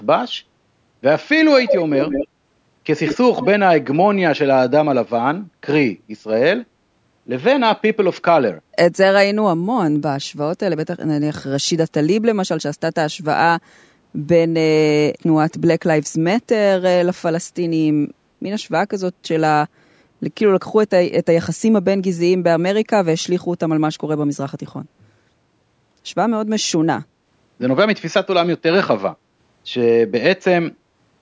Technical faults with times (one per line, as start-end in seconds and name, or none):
1.61-2.28 echo leak
3.06-3.47 echo leak